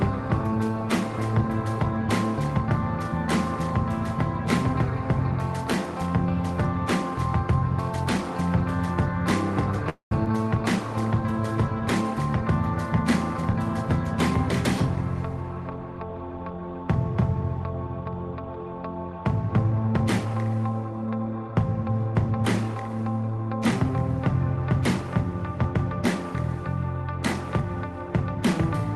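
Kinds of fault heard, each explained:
call audio freeze: From 9.89 to 10.12 s the sound stalls for about 0.23 s. The last sound is stretched into a fading fill, and about 0.1 s of it is silence. When the sound resumes, it picks up exactly where it stopped, so nothing is lost. The likely cause is packets held up in transit, leaving the jitter buffer empty until they arrived. The result is an inserted gap rather than a cut.
skip ahead: At 10.25 s the playback jumps forward. Roughly 70 ms of sound is missing, and the two sides are joined almost directly with a tiny fill. This kind of jump happens when later audio is already waiting, so a stretch is dropped to catch up. It follows closely after the freeze and takes back part of the delay the freeze added. The splice is abrupt.
jitter buffer slow-down: From 10.33 to 10.78 s the sound plays at about 93% speed while keeping its pitch. The receiver repeated single pitch periods or bits of pauses many times, adding about 41 ms in total. 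This builds a reserve in a buffer that was running low. You hear it as slightly drawn-out sound right after the skip.
jitter buffer speed-up: This happens twice. From 13.38 to 13.55 s the sound runs at about 145% speed, with roughly 70 ms cut out, so it sounds hurried. From 19.19 to 20.36 s a milder 107% speed-up removes about 100 ms. In both places the receiver removed short pitch-period pieces to shrink an overfull buffer. The pitch stays the same.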